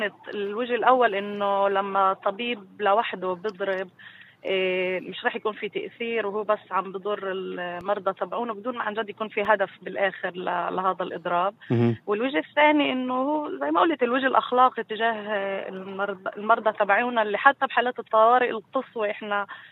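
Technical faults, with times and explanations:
7.81–9.45 s, DC step: the waveform's zero line jumps abruptly at 7.81 s, as happens when a converter recalibrates or an input carrying an offset is switched into the path. The offset holds for about 1.6 s and then drops back at 9.45 s. Each sudden shift of the baseline comes through as a low thump or click, one at either edge, while the sound itself carries on unchanged through the offset stretch.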